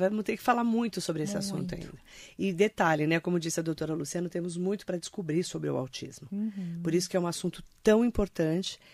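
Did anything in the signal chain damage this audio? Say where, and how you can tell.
No, nothing in this speech recording stood out on listening as damage from any stage of the signal chain.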